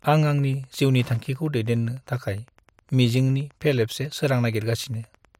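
A Wi-Fi radio sitting close to the audio circuitry is leaking into it. The circuit rectifies the radio's beacon transmissions, which repeat every 102.4 ms, so this speech clip carries a steady tick just under ten times a second from start to finish. The interference sits well below the speech, roughly 35 dB down, so it reads as a faint, regular mechanical ticking underneath the talker. It stays most noticeable in pauses, where nothing masks it.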